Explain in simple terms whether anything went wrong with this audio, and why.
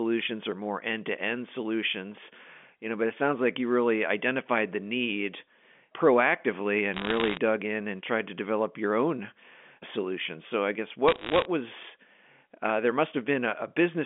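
Two short bursts of crackle show up on what is otherwise an ordinary telephone-quality speech recording: one from 6.94 to 7.38 s, the other from 11.08 to 11.45 s. That's bit errors on a digital phone line. The speech travels as a stream of 8-bit numbers, and during those stretches roughly one bit in a hundred got flipped. Each bad bit corrupts one tiny slice of the sound, and the worst ones turn into sharp ticks on top of the speech.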